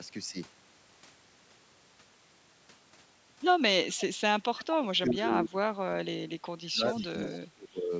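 From 4.47 to 6.95 s the speech sinks and breaks into pieces for about two seconds in total, falling by roughly 25 dB at its deepest. This is speech suppressed in double talk, likely from an echo canceller that could not tell the near talker from loudspeaker echo while both sides spoke, so it attenuated everything. On a waveform the envelope collapses in patches. A spectrogram shows the harmonics thinning and fading in blocks, with the upper bands vanishing first below the 8 kHz ceiling of the band-limited audio.

At 6.97–7.07 s and again at 7.23–7.38 s, faint scraps of an echo leak come through. They are delayed copies of the speech arriving 373 ms late at around 20 dB below it, likely because the far side's loudspeaker echo was not fully cancelled. They look like weak, smeared duplicates of earlier spectrogram patterns, shifted about a third of a second later.

The suppression returns from 7.54 to 7.92 s, lasting about 0.4 s and dipping by about 20 dB.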